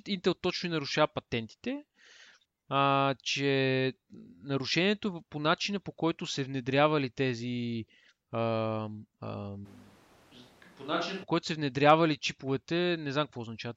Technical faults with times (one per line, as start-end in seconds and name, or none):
9.67-11.22 switch to a distant microphone